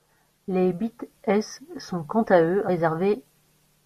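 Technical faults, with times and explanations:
0.47 s and 2.67 s (the second just after "sont quant à eux"), damaged data in a compressed stream: each is a brief blip of roughly 12 to 14 ms that breaks into the speech. At these points part of the compressed data was corrupted, so the decoder misread the affected frames, lost its place in the stream and had to resynchronise on the next valid frame header. The garbled output during that gap sounds like a short chirp, squawk, click or hole.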